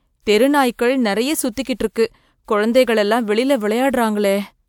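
Listening to the speech in this clip, nothing stood out as a technical problem at any point.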